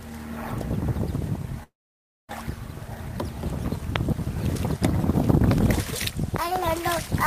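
The audio stops between 1.63 and 2.33 s. A fading buzz covers the gap, then silence, and about 0.6 s never returns. This is likely a long network dropout. A loud pop hits at 3.96 s, about 20 dB above the sound. Double pops follow at 5.51 to 5.60 s and 6.36 to 6.58 s, about 15 dB up. These are likely electrical transients.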